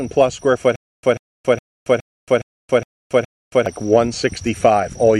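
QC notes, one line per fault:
0.76–3.66 s, stutter with silent gaps: playback likely stalled, replaying its last 140 ms fragment at each retry and then running dry. One burst repeats seven times every 415 ms with 275 ms of digital silence between, and the intended audio there is lost.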